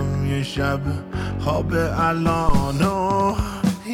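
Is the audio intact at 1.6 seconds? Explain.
Yes, at 1.6 seconds the audio plays through cleanly, with no dropout, click, distortion or other fault at that point.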